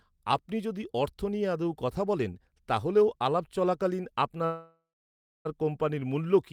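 From 4.45 to 5.47 s the speech trails into a fading buzz and silence, resuming intact at "কোম্পানির মূল্য": a call audio freeze, likely from delayed packets emptying the jitter buffer.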